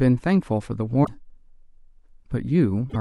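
Damaged data in a compressed stream hits the speech twice, from 1.01 to 1.09 s and again from 2.86 to 2.96 s. Corrupted bytes leave the decoder misreading frames and hunting for the next valid header, so each spot comes out as a brief chirp, squawk, click or short hole.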